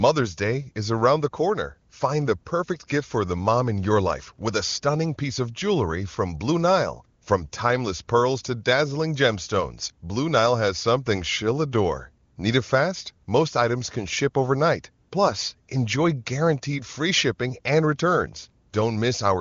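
No technical faults detected.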